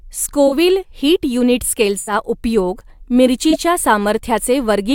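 At 0.47 to 0.53 s, 1.97 to 2.13 s and 3.50 to 3.55 s the speech has a corrupt frame concealed: damaged AAC data was caught by the decoder and masked.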